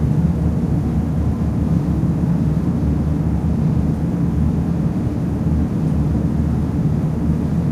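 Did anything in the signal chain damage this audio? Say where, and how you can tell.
No, no signal-chain damage is audible.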